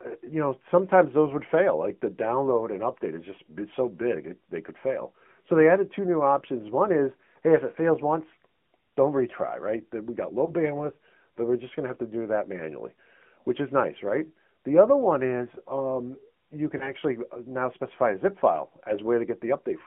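Speech, heard through the AMR narrowband mobile codec for its whole length. The audio is confined to a band of about 150 Hz to 3.4 kHz, so it sounds thin and has no air on top. The codec damage is plainly audible: a buzzy, slightly synthetic edge on the voice. That quality points to a mid-rate mode, near 10.2 kbps. The codec rebuilds speech from a vocal tract model fed by a few pulses, and at this rate the result loses natural texture. There are also lost AMR speech frames, heard twice, from 10.46 to 10.52 s and from 16.78 to 16.94 s. Each is a brief dip or warble in the speech. Each fits a single 20 ms frame that failed its radio checksum. The decoder then filled the gap by reusing the last good pitch and vocal tract settings at lowered gain.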